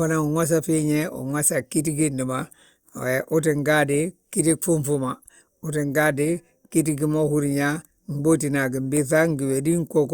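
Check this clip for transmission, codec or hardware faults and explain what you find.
No transmission, codec or hardware fault can be heard anywhere in the clip. The speech holds steady throughout, with nothing breaking into it.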